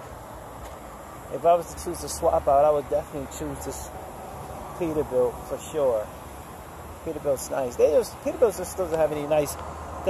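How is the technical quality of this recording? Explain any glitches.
No technical glitches or faults can be heard here.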